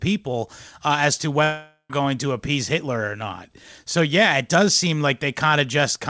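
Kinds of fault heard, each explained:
Long network dropout: after "uh as to", from 1.44 to 1.91 s, the speech gives way to a stretched, fading buzz, then about 80 ms of near silence before "going to appease" returns, with roughly half a second of speech missing. A long stall in packet arrival is the likely cause. Unlike a brief packet-loss glitch of a few tens of milliseconds, the filler here runs out and decays, and the lost stretch never comes back.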